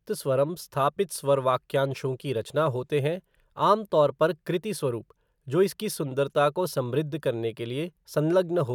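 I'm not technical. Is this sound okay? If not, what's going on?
Yes, it's fine: nothing in this recording sounds broken or out of place, so there's nothing here to worry about.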